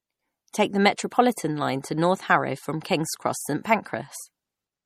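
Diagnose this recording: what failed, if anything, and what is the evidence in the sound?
The speech sounds watery and swirly throughout, with nothing above 15.4 kHz. At the codec stage, this is likely MP3 compression starved of bits, which fits a rate near 48 kbps. The encoder cuts the treble and zeroes weak frequency lines that flicker between frames.

A short hiss precedes two softened attacks, at 0.52 s and 0.96 s, running about 19 ms and 13 ms ahead of each. This is pre-echo from the same codec. Noise sized for each loud attack spreads across its whole transform block, into the quiet before it.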